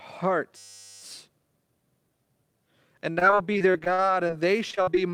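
Speech recording with a system hang loop from 0.57 to 1.02 s: a 10 ms fragment repeats about 45 times, producing a steady 100 Hz buzz in place of the voice. This fits a frozen driver while the audio hardware kept replaying its short ring buffer. Later, repeated packet loss gives choppy, robotic sound from 3.11 to 4.31 s (11 gaps, longest 55 ms, about 22% of the span concealed) and from 4.71 to 5.14 s (6 gaps, longest 42 ms, about 32% concealed). Each dropout was patched by extending the preceding sound, and some audio is still missing.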